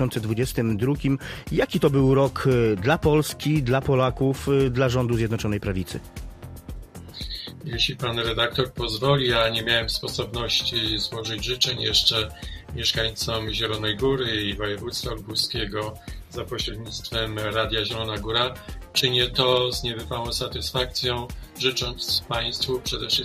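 No technical faults are audible.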